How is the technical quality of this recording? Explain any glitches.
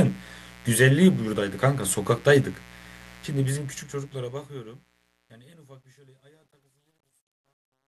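The recording is marred by a constant mains buzz. It runs under the speech for the whole clip.

The mains buzz sits roughly 25 dB below the speech. It is tied to 60 Hz power. Something like a dimmer, a rectifier or an unshielded cable injects sharp switching spikes twice per cycle. Their harmonics stack up into kilohertz territory. The result is a steady, raspy edge rather than a pure hum.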